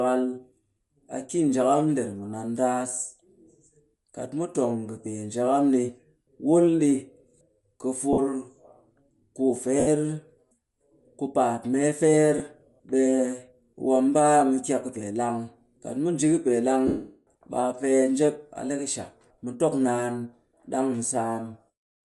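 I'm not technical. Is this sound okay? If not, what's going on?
No, there are two problems. Throughout the clip, the speech has a breathy, grainy edge, as if a hiss were clinging to the upper part of each sound. The likely cause is Bluetooth LC3 compression, the codec that Bluetooth LE Audio uses. To save data it throws away much of the high-frequency detail and fills the gap with noise. The roughness here is plainly audible, not subtle.

There are also four breaks caused by lost LE Audio frames, where chunks of the wireless signal never arrived. They occur at 8.13 s (about 50 ms), 9.80 s (about 70 ms), 12.38 s (about 20 ms), and from 16.87 to 17.27 s (about 400 ms). The receiver fills each gap by repeating the last sound it got in scrambled form, so you hear a brief noisy smear. In the longest break that smear fades away to silence before the sound returns.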